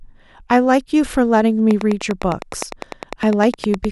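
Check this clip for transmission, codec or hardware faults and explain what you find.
A hardware fault shows up in the second half of this speech clip: a train of clicks from 1.71 s to the end at 3.92 s. Something is likely injecting electrical pulses into the signal path, such as interference from nearby equipment or a faulty connection or power supply. About twenty near-identical clicks arrive at a steady 9.8 per second, peaking roughly 10 dB above the speech. They sound like a regular ticking laid over the talking, and they continue through the pauses.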